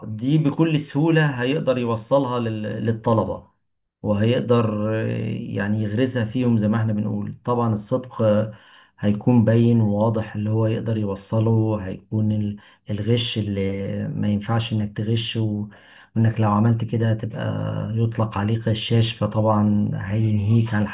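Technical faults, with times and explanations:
No technical faults can be heard anywhere in this speech recording. There is nothing to list by time.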